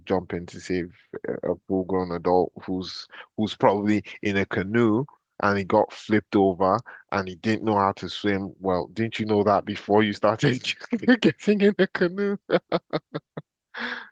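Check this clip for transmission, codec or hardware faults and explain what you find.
No transmission, codec or hardware faults are audible anywhere in this speech recording.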